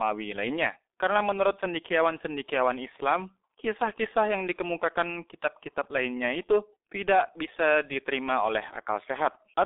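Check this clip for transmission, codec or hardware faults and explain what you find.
One codec fault runs through the whole speech clip. It is the G.723.1 codec, which fits a rate near 6 kbit/s. Nothing passes above 3.7 kHz. Its coarse, slowly updated frames leave the speech muffled and hoarse, with smeared consonants.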